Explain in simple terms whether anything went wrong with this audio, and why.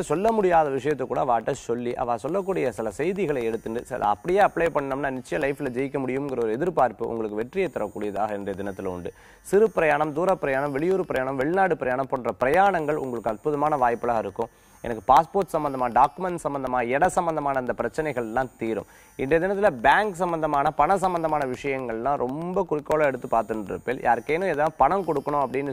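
Something did go wrong: periodic USB or driver dropouts. From 0.16 s to 25.67 s, a tiny sliver of sound, roughly half a millisecond, drops to silence every 0.125 s, eight times a second. Something's stalling the audio connection on a timer, leaving a steady ticking.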